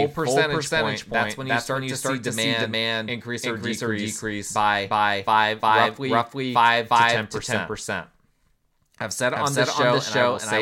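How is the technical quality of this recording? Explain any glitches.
The recording is compromised by one fault that runs through its whole length.

Doubled audio track, throughout: the speech is mixed in twice, with a second full-band copy trailing the first by roughly four tenths of a second at about the same loudness. This is likely a second capture of the same signal arriving by a slower path. Unlike a room echo, the copy has no decay or reverberant colour, so every syllable is cleanly repeated and overlaps the next, smearing intelligibility.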